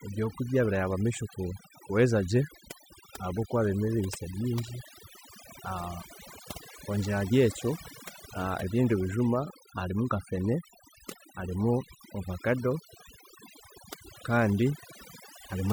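Throughout the speech, the background drops and breaks up into twinkling specks while quiet parts of the voice vanish with it: overdone noise removal, gating quiet bands along with the noise.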